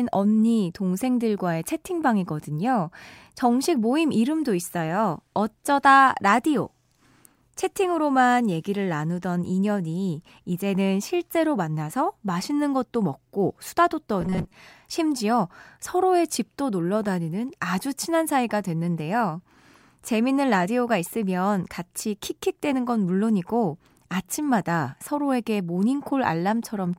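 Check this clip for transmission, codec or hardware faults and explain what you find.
One fault stands out in this speech. Robotic sound from repeated short buffers, 14.21 to 14.54 s: new audio likely arrived too late, so a roughly 5.3 ms fragment was looped, skipping most of the real signal. The loop imposes a fixed 188 Hz buzz, making the speech rigid and metallic.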